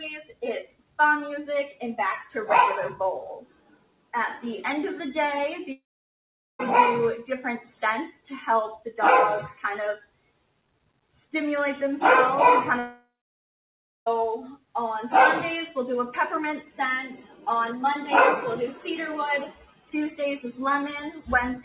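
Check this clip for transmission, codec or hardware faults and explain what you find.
Yes, there are faults: a speech noise suppressor acting on non-speech sound, several deeper suppressor cuts, and two long gaps. The band stops near 4 kHz, as a G.711 mu-law call path would produce.

Noise suppressor applied to music or sounds, throughout: a suppressor built for voice treats steady tones, ambience and decays as noise. Level swings by about 5 dB as it reacts, so sustained parts pump and thin while attacks pass. Unlike a dropout, nothing goes missing.

Sound cut by the noise suppressor, at 0.24–0.42 s, 3.40–4.13 s, 9.97–11.16 s, 14.56–14.75 s, 17.24–17.46 s and 19.51–19.88 s: here the suppressor judged whole stretches as noise and pulled them down by about 15–18 dB (about 9 dB at 17.24 s). Held sounds and tails sink or cut short, but onsets survive and the sound stays continuous.

Long network dropout, at 5.72–6.61 s and 12.79–14.08 s: audio likely stopped arriving over the network for about 0.9 s and 1.3 s. 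The receiver briefly extends the last sound as a fading buzz, then leaves silence, and playback resumes later with that content gone. This differs from a suppressor cut, which only lowers the level without losing time.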